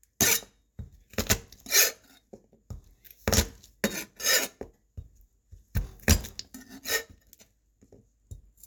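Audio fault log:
No faults heard anywhere in these sounds.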